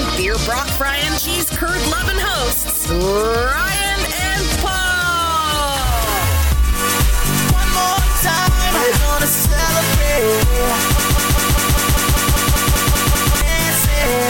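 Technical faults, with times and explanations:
10.99–13.41 s, broken-record loop: a roughly 0.2 s slice repeats 12 times back to back, likely a stalled player resending its last fragment, so the real audio there is gone.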